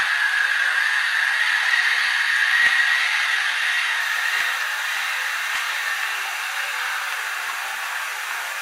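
The clip is an everyday sound recording, and it shows an adaptive stream starting at a low bitrate. From 0.0 to 4.0 s the treble is thin and partly synthetic, with nothing above 12.3 kHz, and codec artefacts are strong. This fits a 16 kbit/s HE-AAC start. At 4.0 s the quality jumps up with no gap, which points to a switch to about 96 kbit/s AAC-LC. The player began cheaply, measured the connection, then stepped up.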